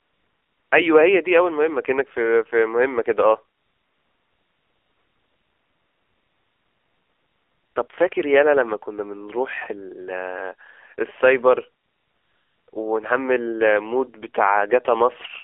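Throughout, the AMR narrowband mobile codec squeezes the speech into a 300 Hz to 3.5 kHz telephone band and plainly buzzes and synthesises it. The coarseness fits the 7.4 kbps mode. Unlike simple band-limiting, the speech itself sounds rebuilt rather than only muffled.

AMR comfort noise fills 0.0 to 0.72 s, 3.58 to 7.76 s, a brief blip at 7.88 s, 11.84 to 12.68 s and another blip at 12.70 s. During these pauses speech frames stopped and the receiver substituted smooth synthetic hiss, so the real background switches abruptly to steady noise instead of dropping to silence as a gate would.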